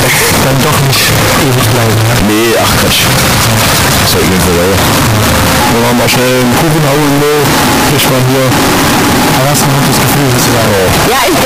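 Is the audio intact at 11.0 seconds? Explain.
No. At 11.0 seconds, as everywhere in the clip, the sound is a harsh, nearly square waveform held at an almost fixed, high level. Quiet background is as loud as the main sound. This points to float read as integer. The likely cause is 32-bit float samples decoded as 32-bit integers.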